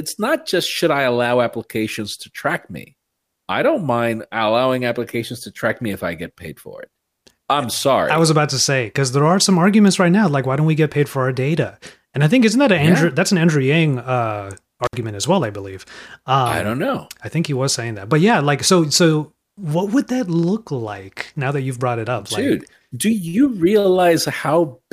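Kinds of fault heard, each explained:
Intermittent contact: from 14.84 to 14.96 s a loose connection in the signal chain briefly opens, so the speech cuts out for about 61 ms, with crackle as the contact breaks and remakes and faint hiss while the line is open.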